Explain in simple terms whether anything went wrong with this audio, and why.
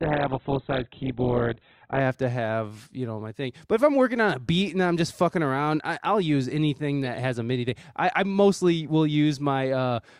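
Until 2.0 s the speech sounds dull and muffled, clearing suddenly before "have to have you": an adaptive stream starting at a low bitrate.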